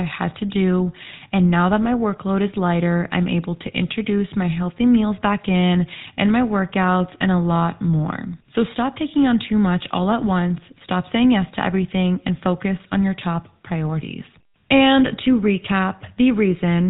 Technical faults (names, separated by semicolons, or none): GSM full-rate codec